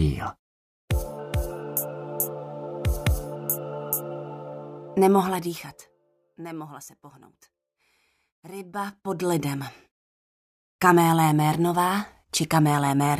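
Zipper noise runs from 8.53 to 9.27 s, while the level changes by roughly 20 dB. The gain moves in discrete jumps, around a hundred per second, with no ramping between them. Each jump creates a tiny discontinuity in the waveform, and at that rate the clicks merge into a buzzy, ticking rasp riding on the sound for the length of the move.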